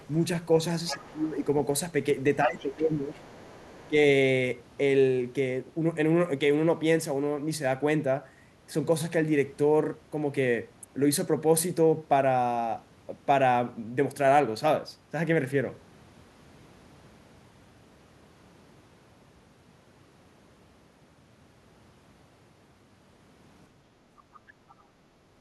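Other side's voice leaking through opens the clip from 0.00 to 0.21 s, faint at about 30 dB below the speech, and returns louder, about 15 dB down, from 0.86 to 1.19 s. The far talker was likely played on a loudspeaker and not fully removed by the echo canceller, so a second voice sits under the main one.

Speech suppressed in double talk overlaps that, from 0.92 to 1.44 s, with the talker's level dropping by up to about 15 dB for around half a second. With both sides talking, the canceller likely could not separate them and turned everything down, so the voice dips and dulls.

The same suppression recurs from 2.43 to 3.23 s, dropping about 10 dB, while faint leakage, about 30 dB down, likely runs from 2.59 to 3.89 s. A brief dip of about 10 dB follows from 3.89 to 3.94 s, likely again from double talk.

Background gated by the echo canceller runs from 23.89 to 25.35 s: while the loudspeaker played, the microphone was pulled down hard, so the room sound sinks by about 9 dB for roughly one and a half seconds before recovering. 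Within that stretch, from 24.34 to 24.74 s, faint leakage of the other side's voice appears at about 30 dB below the speech, likely residual echo.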